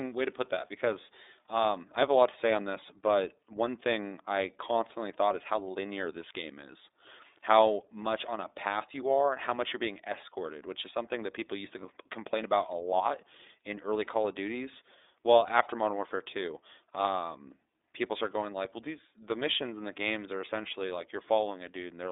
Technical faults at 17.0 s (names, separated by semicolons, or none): iLBC codec